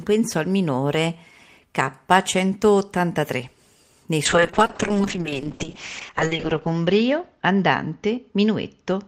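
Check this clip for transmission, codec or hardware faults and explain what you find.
One transmission fault is present: a call bitrate drop starting at 4.26 s and lasting to the end of the speech. The bandwidth estimate fell and the encoder went from 32 kbps to 7 kbps, holding the lowest rate for about 2.27 s. With so few bits, Opus codes coarsely and narrows the band from 20 kHz to 8 kHz, so the sound turns muffled and rough. Unlike packet loss, there are no gaps or glitches. The degradation is continuous.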